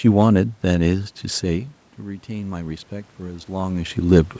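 Automatic gain rising, 0.87 to 4.04 s: the input fell about 16 dB, so gain crept up about 5 dB, swelling speech and room noise together.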